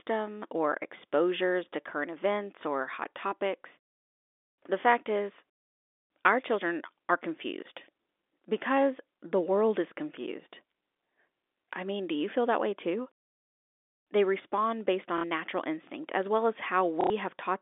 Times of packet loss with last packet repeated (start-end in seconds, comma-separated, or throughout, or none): 15.18-15.24, 17.01-17.10